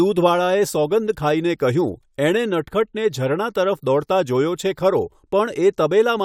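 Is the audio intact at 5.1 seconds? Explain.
Yes, the audio is intact at 5.1 seconds, with no audible fault at that point in the speech.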